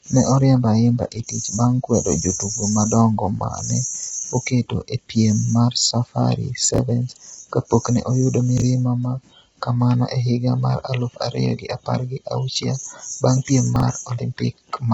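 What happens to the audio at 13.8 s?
Right around 13.76 to 13.82 s there's a chunks-out-of-order glitch. A short slice of audio, roughly 21 ms long, turns up two chunks late and plays after material that should have followed it. Nothing actually goes missing, but the sequence gets shuffled, leaving three hard joins. You hear that as a brief jumbled stutter.

Underneath that moment, the whole clip carries the rough, grainy sound of heavy compression, likely low-delay AAC (AAC-ELD) at a low rate, something like 16 kbps. At that low bitrate the pitch harmonics are coded coarsely, so noise fills the gaps between them and the speech sounds gritty and a bit synthetic. Nothing is left above about 7.8 kHz, so the top end sounds dull and slightly artificial.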